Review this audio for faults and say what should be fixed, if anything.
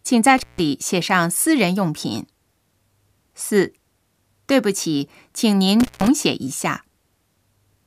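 Intermittent contact breaks the speech at 0.38–0.62 s and 5.80–6.08 s, when a loose cable or plug opened for 152 ms and 136 ms. The waveform collapses to a near-flat trace with crackle spikes at each edge, and the spectrogram shows broadband vertical clicks bracketing a gap filled with faint hiss. Reseat or replace the suspect cable and connectors, and secure them with strain relief before recording.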